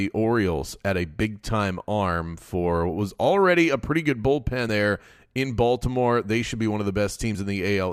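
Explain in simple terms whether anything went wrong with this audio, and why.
Yes. Compressed frames were skipped twice: at 4.69 s, after "already a pretty good", about two 32 ms frames (roughly 70 ms) vanish, and at 7.34 s, after "should be one of", about one frame goes. The speech jumps ahead at each join.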